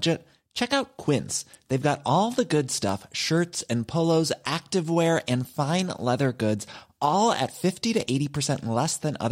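A single flipped bit in a stored or transmitted sample produces a bit error spike at 2.89 s, between "got all the good" and "shirts and polos activewear": one sample leaps by a power of two, to about -16 dBFS, and snaps back. It is heard as a sharp, broadband tick with no relation to the speech around it. A second, quieter one-sample spike, at about -29 dBFS, follows at 7.47 s, just after "fine leather goods all".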